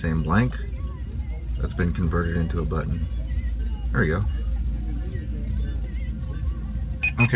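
No faults found; the audio came through a WebRTC call path and has nothing above 4 kHz, which fits a G.711 mu-law codec at 64 kbps and is expected for that path.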